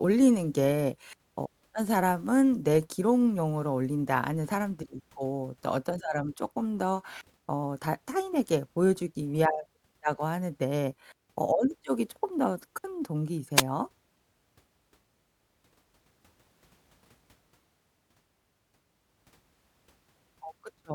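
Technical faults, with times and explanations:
13.56–13.62 s, wireless microphone noise hit: a brief swish of static over the speech as the radio signal fades and receiver noise rises through it.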